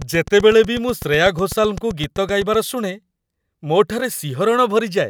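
From 0.02 s to 2.55 s the speech carries a train of clicks: around twenty sharp, near-identical pulses at a steady 7.9 per second, ticking through the pauses as well as the speech and peaking a few dB above it. On a waveform they show as narrow, evenly spaced spikes; on a spectrogram as thin vertical broadband lines at regular intervals. The likely cause is interference from nearby equipment or a faulty connection or power supply.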